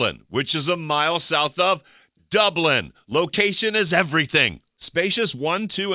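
No technical faults can be heard in this audio.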